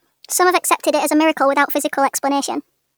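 Throughout the clip, the samples are clocked out faster than they were captured, with no rate conversion, a wrong sample rate fault. The ratio fits 32 kHz material played back at 44.1 kHz. Timing and pitch shift together, so the speech runs 1.38 times too fast and sits about 5.55 semitones high. The voice sounds hurried and chipmunk-like from start to finish, with every syllable compressed.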